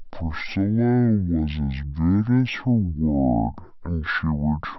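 Stereo read as mono throughout this speech: interleaved left and right samples play as one channel, halving the speed and dropping pitch an octave.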